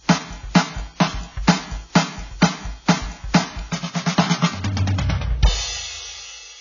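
From start to finish the music sounds dull, with nothing above about 7.1 kHz and two kinds of coding artefact layered together. This is likely transcoding between lossy codecs: a very low-bitrate AAC encode near 16 kbit/s, re-encoded to WMA.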